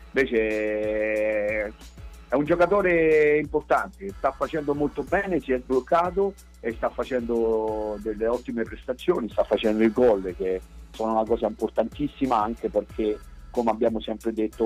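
From the first second to the last, a steady mains hum sits under the audio at 60 Hz, with some low harmonics stacked above it. Power-line energy is leaking into the signal path, most plausibly through a ground loop or coupling from a nearby transformer. The hum runs at roughly 25 dB below the programme level, loud enough to be heard as a constant low drone beneath everything and most exposed wherever the wanted sound drops away.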